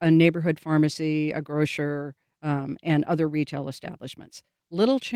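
Nothing goes wrong anywhere in this speech recording; there's no technical fault to point to at any moment.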